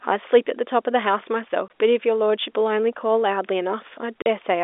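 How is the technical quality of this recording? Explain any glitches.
It's telephone-band speech with two brief dropouts. Packet loss filled with silence cuts the sound at 1.68–1.70 s and again at 4.22–4.26 s. The receiver played nothing where audio went missing, so you get hard-edged holes. The 20 ms and 40 ms gaps point to one 20 ms packet lost, then two. The G.711 phone coding caps the band at about 3.6 kHz.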